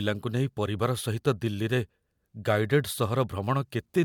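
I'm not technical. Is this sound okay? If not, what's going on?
Yes, nothing in this speech recording points to a technical problem.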